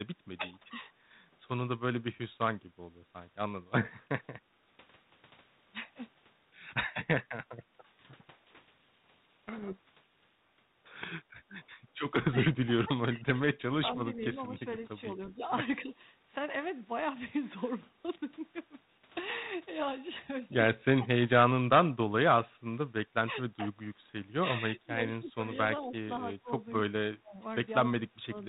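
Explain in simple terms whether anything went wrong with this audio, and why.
Two things went wrong. The speech keeps dipping or breaking up in pieces at 0.16–0.67, 2.02–2.09, 4.01–4.6, 7.04–7.9, 11.29–11.67, 12.3–14.7, 15.84–15.9 and 20.99–28.34 s. That's speech suppressed in double talk, likely because the echo canceller turned everything down while both sides talked at once.

From 8.06 to 10.4 s the speech is buried under harsh distortion. That's a codec payload misread: the receiving end seems to have read the G.726 code bits in the wrong order.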